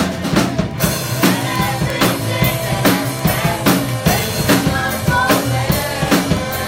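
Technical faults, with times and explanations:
0.12–6.67 s, word clock ticks: sharp ticks recur about every 50 ms, around 150 in all. The receiver's clock isn't locked to the sender's and drifts by roughly 500 ppm, so at each slip one sample is dropped or repeated, producing a click.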